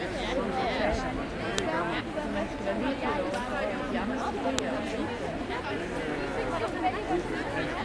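Separate pieces of audio, about 3.0 s apart, were joined or streamed without stripping their file headers, so the header bytes at each join are played back as if they were sample values. Those bytes have nothing to do with the surrounding sound, and each produces a file header played as audio: a brief, sharp snap that cuts in abruptly and loudly at 1.58 s and again at 4.59 s, regardless of what the sound is doing at that moment.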